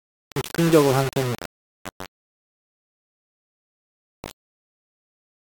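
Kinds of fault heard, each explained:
Low bit depth without dither: The speech sounds grainy and gritty throughout, with distortion that moves with the voice. Rounding to likely 4 bits left coarse steps, so error sits only about 15 dB below the signal. Quiet tails sputter between steps or drop out.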